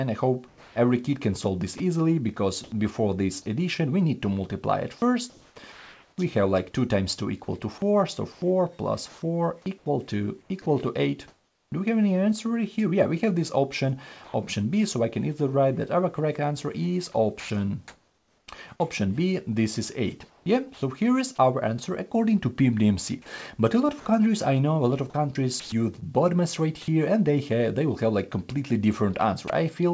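From 0.48 to 14.34 s the sound is chopped by the voice detector. Pieces drop out again and again, about 2.08 s in all. Hiss takes their place. The likely cause is a sender-side detector toggling, with comfort noise filling the gaps. The same choppiness returns from 17.40 to 20.82 s, with about 0.94 s replaced, and from 25.10 to 26.04 s, with about 0.18 s replaced.

Near the end, from 29.48 to 29.50 s, sound is dropped by the voice detector. A 20 ms sliver gives way to steady noise, then the sound returns. The detector likely mistook this quiet moment for background and stopped sending, so the receiver played comfort noise. Throughout, nothing is heard above 8 kHz, which fits a wideband call codec such as G.722.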